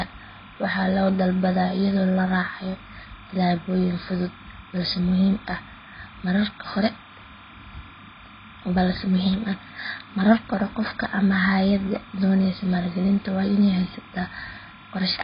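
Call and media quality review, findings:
Timecode bleed, whole clip: linear timecode from an adjacent track or cable leaking into the speech path. Square-wave code at 29.97 frames per second, alternating near 1 kHz and 2 kHz, about 25 dB under the speech, heard as a constant chirping warble.

AAC compression, whole clip: likely a low-rate AAC-LC encode, consistent with roughly 16 kbps. Heavy quantisation and a lowered cut-off leave nothing above 5 kHz, so the speech sounds dull and smeared, with fizzy, warbling sibilants.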